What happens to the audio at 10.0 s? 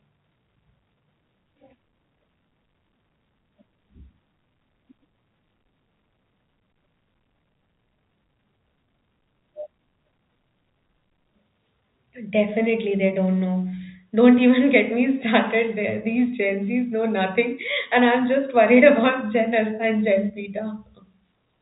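Nothing goes wrong at 10.0 s; the speech carries on intact through that moment, with the narrow telephone-band sound of G.711 coding that stops just under 3.8 kHz.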